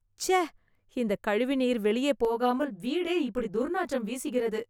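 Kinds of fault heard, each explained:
Channel delay (comb filtering): from about 2.25 s, right after "இந்த கழிவுநீர் வெளியே", to the end, one channel runs roughly 20 ms behind the other, and summing them to mono cancels shared content at evenly spaced frequencies starting near 30 Hz. The speech sounds rough and slightly doubled. The notches stay fixed rather than sweeping, which separates it from flanging, and the delay is too short to be heard as a distinct echo.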